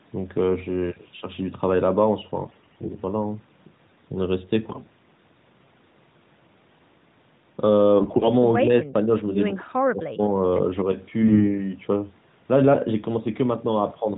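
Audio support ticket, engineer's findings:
AMR bit errors: hoarse, scratchy, gargly bursts at 2.44–3.02 s, 4.70–4.89 s, 8.00–8.29 s and 11.23–11.61 s. Pitch and level hold. A few percent of the less-protected AMR-NB bits arrive flipped, so pulse positions and fine gain and spectral values decode wrong.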